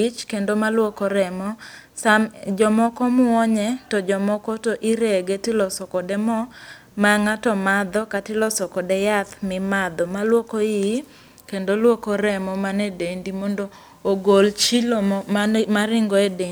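No audible technical faults.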